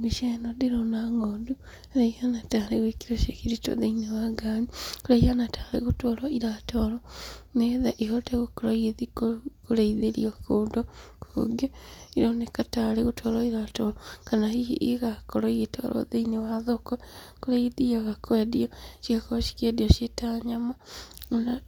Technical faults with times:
none

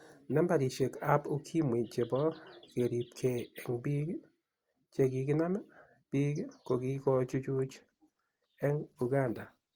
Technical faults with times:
6.92-9.76 adaptive stream at a lower bitrate

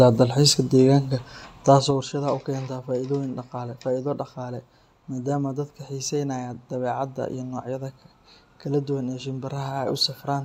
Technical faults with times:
1.62-2.08 zipper noise

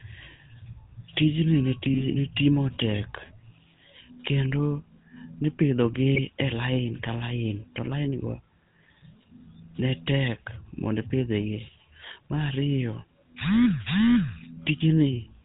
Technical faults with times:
0.00-15.44 GSM full-rate codec
1.94-2.07 GSM bit errors
6.15-6.19 GSM bit errors

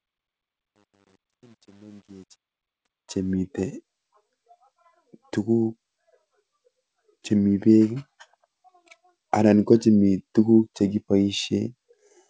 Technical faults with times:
0.00-3.33 truncation distortion on a fade

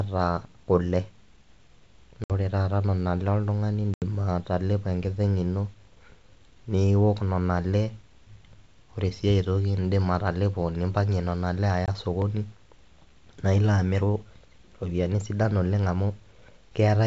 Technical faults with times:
2.24-2.31 packet loss on an ADPCM call
3.94-4.03 packet loss on an ADPCM call
11.86-11.89 packet loss on an ADPCM call
12.22 block of digital silence

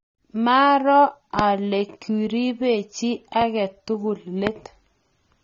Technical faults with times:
0.00-5.43 AAC compression
1.39-1.41 loud pop
3.41-3.44 loud pop
4.47-4.49 loud pop

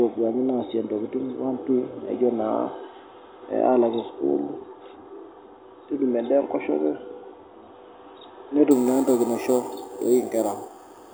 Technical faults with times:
8.71-11.14 imaging from sample-and-hold upsampling

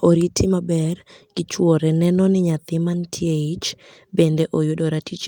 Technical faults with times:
none

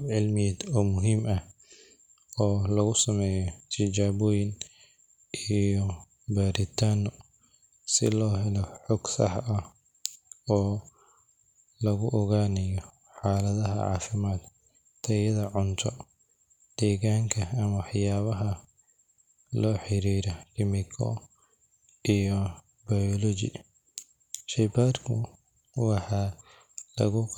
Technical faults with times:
none

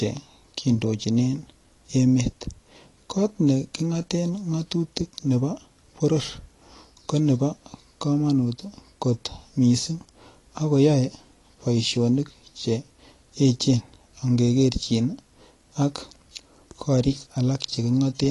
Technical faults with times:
0.00-18.30 AAC compression

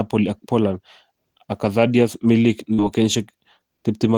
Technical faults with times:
2.73-2.81 burst of packet loss

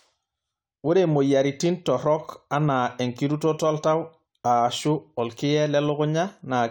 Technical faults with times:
none

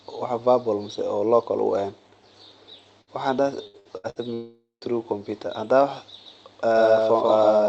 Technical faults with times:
3.01-3.10 burst of packet loss
3.67-4.19 repeated packet loss (robotic sound)
4.34-4.84 long network dropout
6.26-7.68 doubled audio track

